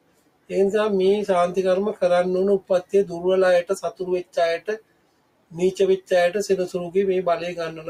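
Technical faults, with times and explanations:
Throughout: noise suppressor applied to music or sounds. A suppressor tuned for speech is treating the sustained, steady parts of this audio as noise and pulling them down, while sharp onsets pass largely untouched. The gain it applies swings by roughly 20 dB as it decides frame by frame what counts as noise, so held material and ambience pump and thin out instead of sitting at a stable level, and decays are shortened.
0.00–0.50 s, 2.61–2.94 s, 4.60–5.55 s: sound cut by the noise suppressor. In these stretches the suppressor clamped down harder than elsewhere, with drops reaching about 18 dB, about 17 dB and about 18 dB respectively. The affected portions last around half a second, a fifth of a second and a full second. Whatever was steady or fading here sinks audibly or loses its tail, because the processor judged it to be background rather than wanted signal.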